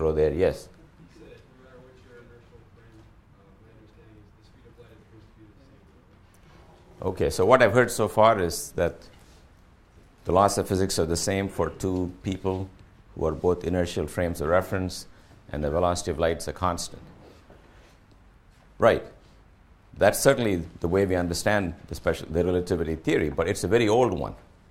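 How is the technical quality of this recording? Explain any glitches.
Nothing in this recording catches the ear as a glitch, so there's nothing to explain.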